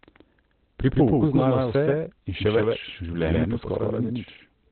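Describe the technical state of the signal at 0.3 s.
At 0.3 s the signal carries a doubled audio track, present from start to finish of the speech. A second full-band copy trails the original by roughly 150 ms at about the same level. It has no decay or room colouring, so it sounds like a distinct, hard-edged repeat rather than reverberation. The likely cause is the same audio being captured a second time through a slower path, or an edit leaving two copies out of step.

The same moment also shows heavy Opus compression damage, again throughout. Nothing is present above about 4.2 kHz, so the sound is narrowband, muffled and hoarse, with consonant detail dulled. That narrowed bandwidth and speech-mode character point to the encoder running in its SILK mode at a very low rate, likely around 12 kbps. At that rate it discards the upper band entirely and models what remains coarsely.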